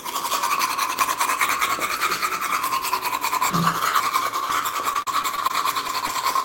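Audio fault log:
3.5–4.5 s, chunks out of order: a half-second chunk plays one chunk late, swapping order. The sound jumbles at the hard joins, but nothing is actually missing, unlike a dropout.
4.93–5.51 s, repeated packet loss (robotic sound): five holes up to 37 ms, about a sixth of the stretch, are patched by extending the previous sound. The result is choppy, not a single smear.
5.87–5.91 s and 6.07–6.11 s, short concealed packet loss: two isolated 20 ms holes are filled by continuing the preceding sound and then blended back. Each is a brief smear or wobble, not a sustained robotic stretch.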